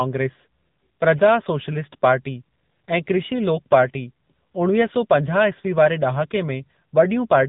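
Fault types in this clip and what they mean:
AMR narrowband mobile codec: The speech has been squeezed through the narrowband mobile codec, which rebuilds each 20 ms frame from a vocal-tract model excited by a few pulses. The damage is plainly audible: a buzzy, synthetic edge that fits a low mode of around 8 kbps. On a spectrogram, all energy stops at a flat ceiling near 3.8 kHz, with blank space above. Within the band, the harmonics look smeared and blocky frame to frame.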